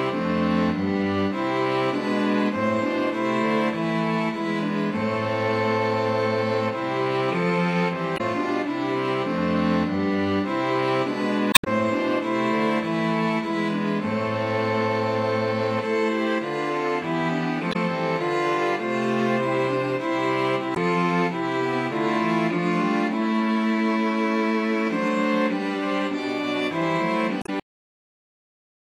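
Five short bursts of damaged data in a compressed stream occur at 8.14–8.21 s, 11.51–11.67 s, 17.69–17.76 s, 20.72–20.77 s and 27.39–27.49 s, each lasting roughly 50 to 170 ms. Corrupt bytes make the decoder misread frames, lose sync and hunt for the next valid header, producing a chirp, squawk, click or short hole. On a spectrogram each shows as a narrow vertical smear of broadband or garbled energy that breaks the surrounding pattern.

At 27.60 s comes a cut-off end: the sound stops mid-event, and the final buffers were never written. The waveform drops abruptly to a flat line of digital silence with no decay tail, and the spectrogram goes blank from one column to the next, with a possible thin vertical click line at the edge.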